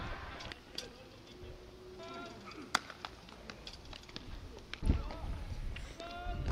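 At 1.99 s, about a second of audio was discarded while later audio was already queued, so playback makes a skip ahead, joining both sides almost seamlessly. From 2.09 to 2.87 s, a jitter buffer speed-up trims short pitch-period slices, around 70 ms in total, so the sound runs about 9% fast at unchanged pitch.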